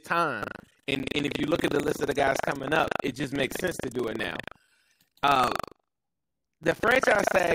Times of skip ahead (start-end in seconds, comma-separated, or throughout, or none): none